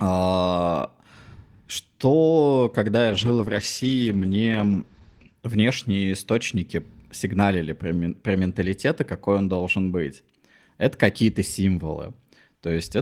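A speech recording with one call bitrate drop. It starts at 3.12 s, just after "что когда я", and lasts until 5.47 s. The encoder was starved of bits. The sound turns coarse and watery, and the top end disappears. The audio bandwidth shrinks from 20 kHz to about 8 kHz, so it sounds muffled. The worst stretch lasts about 2.27 s. The sound points to a fall from roughly 32 kbps to 12 kbps before recovering.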